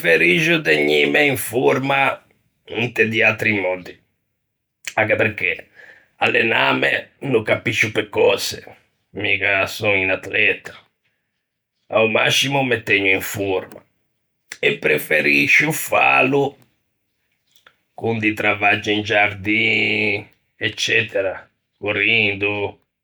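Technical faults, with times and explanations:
No technical faults can be heard in this speech recording, and the signal holds steady across its whole span.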